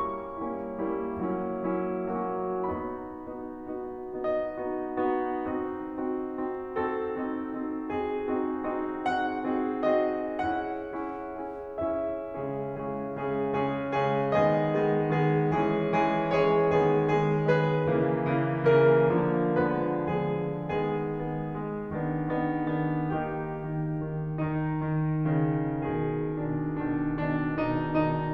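From 23.97 s to 28.24 s, one channel of the music runs late by only a couple of samples, around 0.05 ms, before the two are folded to mono, producing channel delay (comb filtering). Content shared by both channels cancels at evenly spaced frequencies, with the first notch near 10 kHz. The upper treble goes dull, taking the air off the top of the mix for the last few seconds.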